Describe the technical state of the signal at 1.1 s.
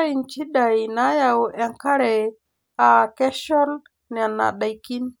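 At 1.1 s the speech signal is intact, with no audible fault at that moment.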